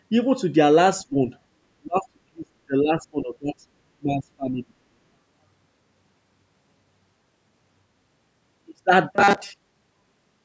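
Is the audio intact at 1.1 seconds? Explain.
No. From 1.07 to 1.16 s the speech dips sharply, down by roughly 20 dB at its deepest, for about a tenth of a second. This is likely speech suppressed in double talk: with both sides talking, the echo canceller turned down the near talker along with the echo.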